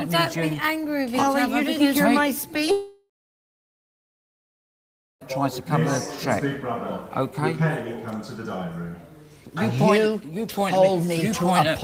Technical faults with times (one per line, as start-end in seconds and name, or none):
2.71-5.35 long network dropout